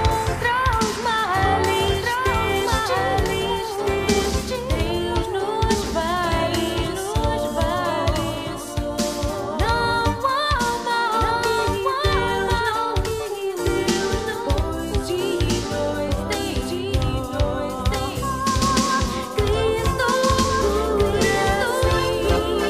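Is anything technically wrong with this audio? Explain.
Yes. A doubled audio track runs through the whole clip. A second, full-band copy of the sound trails the original by roughly one and a half seconds at about the same level, so every event is heard twice. There is no decay or room colouring on the repeat. It is likely caused by the signal being captured a second time through a slower path, or by an edit that holds two copies out of step. On a spectrogram, each pattern reappears identically about 1.5 s later. The waveform shows the same shapes overlaid at that fixed offset.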